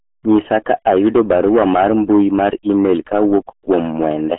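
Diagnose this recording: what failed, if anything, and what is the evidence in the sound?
Hard clipping at the converter or sample-format stage: driven about 11 dB over, roughly one sample in twenty is flattened, so peaks crackle and the waveform shows squared-off tops.

RealAudio 14.4 codec damage, consistent with an 8 kbit/s stream: speech is muffled and gargly throughout, and a spectrogram shows nothing above 3.8 kHz.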